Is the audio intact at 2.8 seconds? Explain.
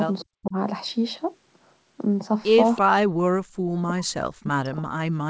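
No. An echo leak runs from 2.76 to 2.81 s: a faint, delayed copy of the speech, trailing the original by about 329 ms and sitting roughly 20 dB below it, briefly surfaces as a scrap. This is likely caused by a far end playing the call over a loudspeaker, where its echo canceller failed to strip out everything its microphone picked up from that speaker and sent the remainder back down the line.

Immediately after, from 2.82 to 2.94 s, comes speech suppressed in double talk: the speech drops out sharply, by something like 40 dB at its deepest, for about a tenth of a second in total. The likely cause is both sides talking at once, with the echo canceller unable to tell the local talker from loudspeaker echo and so turning the whole signal down.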